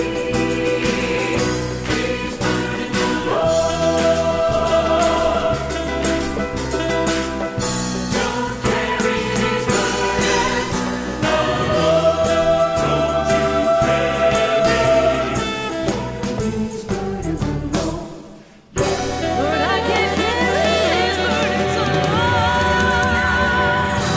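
No technical faults can be heard anywhere in the clip. Nothing in it calls for a timed entry.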